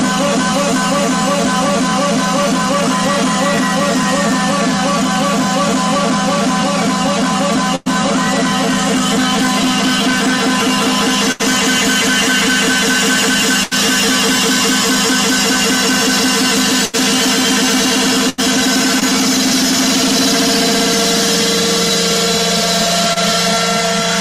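Five bursts of packet loss left the receiver filling gaps of roughly 80 to 100 ms: 7.75 to 7.88 s, 11.32 to 11.41 s, 13.63 to 13.73 s, 16.85 to 16.95 s and 18.29 to 18.40 s. The last sound is held and faded, as a buzz or hiss, before audio resumes with 80 to 100 ms skipped.

Short concealed packet loss follows at 19.00 to 19.03 s and 23.13 to 23.18 s, each dropping about 20 ms before decoding. The receiver extends the preceding sound for a few hundredths of a second, then blends back, leaving a brief smear or wobble.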